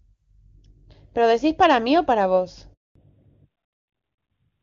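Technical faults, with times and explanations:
2.73 to 2.95 s, handover gap: the speech dies out within a few tens of milliseconds and leaves 220 ms of dead silence while the call switches networks and no frames arrive. There are no clicks, warble or repeated fragments, which sets it apart from packet loss concealment.
2.95 s to the end, fallback to narrowband: from the moment the speech returns, nothing remains above 4 kHz, so it sounds duller and rougher than the crisp HD Voice before the gap. That fits a drop from AMR-WB at 23.85 kbit/s to AMR-NB at 12.2 kbit/s. Unlike a simple low-pass filter, the change arrives exactly as the handover ends and persists.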